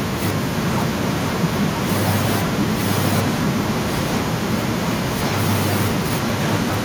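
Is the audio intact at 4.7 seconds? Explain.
No. At 4.7 seconds the speech carries an echo leak, which runs from 0.54 to 5.23 s. A second copy of the speech trails the original by about 0.97 s, only slightly quieter than the speech. The likely cause is a loudspeaker on the far end whose echo canceller let its microphone pick-up return down the line. Room reverberation smears sound within a fraction of a second, but this copy arrives as a distinct, late repeat.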